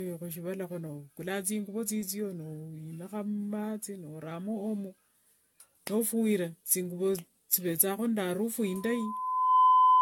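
From start to end, the speech sounds swirly, smeared and hollow, with nothing above 17 kHz. This generation loss likely comes from repeated AAC encoding, fitting about 96 kbit/s, done several times.

At 8.66 s a loudspeaker feedback squeal begins. The loop gain passes one at 1 kHz. That tone swells over about a second to about 10 dB above the speech, lasting to the end at 10.02 s.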